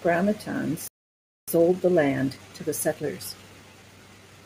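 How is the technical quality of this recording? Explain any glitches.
The recording has two related faults: a dropout in playback followed by hurried delivery for the rest of the clip.

From 0.88 s to 1.48 s there is a playback stall. The speech halts mid-flow and the output goes silent for about 0.6 s. This was likely caused by the player's buffer running dry or its audio thread being blocked, so nothing reached the output until it recovered.

From 1.48 s to the end, time-compressed catch-up follows. The player trims its accumulated backlog by dropping short segments and cross-fading across the joins, running at 1.1x speed. The speech sounds rushed but keeps its normal pitch.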